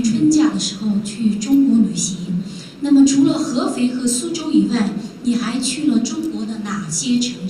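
Mains buzz runs through the whole clip, a steady, raspy hum sitting roughly 40 dB beneath the sound. Switching spikes from a 50 Hz supply, twice each cycle, leak into the signal path, spreading harmonics of 50 Hz up into the kilohertz range.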